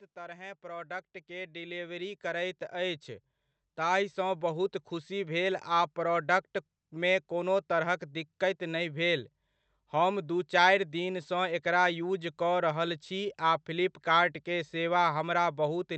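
From 0.14 s to 5.42 s the speech and its background grow louder together, climbing by about 16 dB over those five seconds. This is automatic gain rising: the gain control judged the input too quiet and steadily raised its level.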